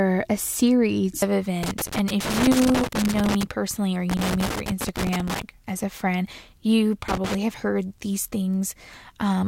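Loose connector crackle breaks through the speech from 1.63 to 3.43 s, 4.10 to 5.42 s and 7.08 to 7.35 s: a worn contact keeps cutting in and out, chopping the signal into irregular scratchy pops.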